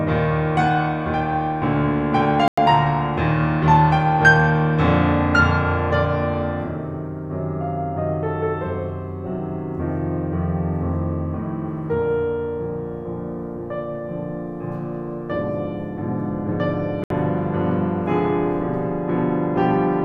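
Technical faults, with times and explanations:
2.48–2.58 s and 17.04–17.11 s, digital broadcast dropout: the music mutes to clean silence for about 0.1 s, then 0.07 s, and resumes further on. The silent gaps fit roughly three and two lost frames. Unlike analogue fading, there's no hiss, and nothing is repeated to fill the holes.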